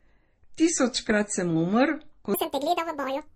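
From the start, the speech sounds smeared and swirly, with the top end cut off. This is transcoding between lossy codecs. The mix of artefacts likely comes from an MP3 pass followed by Opus, both at low rates around 32 kbit/s.

At 2.34 s the section at the wrong speed begins and runs to the end. It plays 1.74 times too fast. Pitch jumps about ten semitones. The voice turns high and hurried, likely from playback against the wrong clock.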